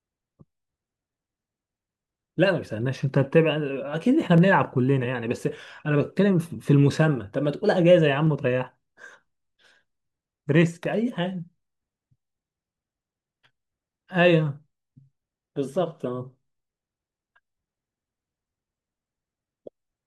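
Two devices were likely running on separate clocks a few hundred ppm apart, causing clock drift buffer slips that drop or repeat a small block of samples. In this speech, a regular click recurs about every 1.29 s from 0.50 s to 19.9 s.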